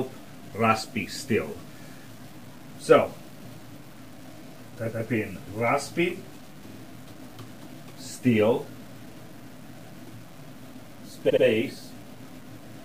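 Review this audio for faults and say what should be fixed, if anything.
Low bit depth without dither affects the whole clip. A grainy distortion follows the sound and changes as it changes. Quiet passages turn gritty. The error sits only about 25 dB below the signal. The likely cause is truncation to something like 8 bits with no dither. The rounding error is tied to the signal, so it sounds like distortion. Keep at least 16 bits through the chain, and add dither whenever you reduce bit depth.

Repeated frames cause three stutters. At 4.92 s, a 139 ms block plays one extra time. At 6.68 s, a 46 ms block plays two extra times, adding 93 ms. At 11.29 s, a 70 ms block plays two extra times, adding 139 ms. Each repeat jumps back to material already heard. The clip is longer by the repeated time. Check the encoding, storage or streaming path so that each compressed frame is written and decoded exactly once.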